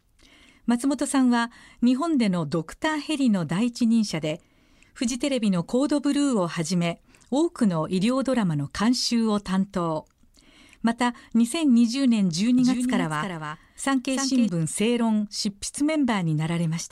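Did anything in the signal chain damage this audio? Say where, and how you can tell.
Yes: a doubled audio track from 12.59 to 14.49 s. A second, full-band copy of the speech trails by about 300 ms at about 5 dB down, without decay or room colour, and switches on and off abruptly. Likely cause: a slower capture path mixed in.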